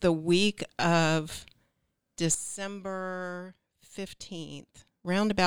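Speech; a sudden gain jump at 2.35 s drops sound and noise together by about 12 dB until 5.05 s, likely an unramped digital gain change.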